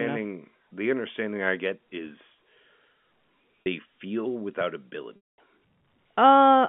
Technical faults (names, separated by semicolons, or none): packet loss with pitch repetition